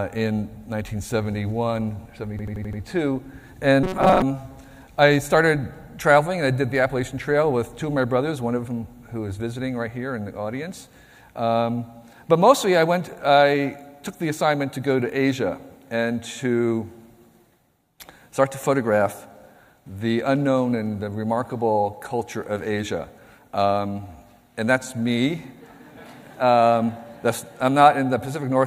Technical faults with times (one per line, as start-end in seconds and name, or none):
2.39-2.82 system hang loop
3.83-4.22 robotic sound from repeated short buffers